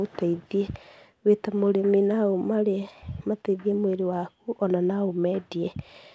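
No technical faults can be heard in this speech.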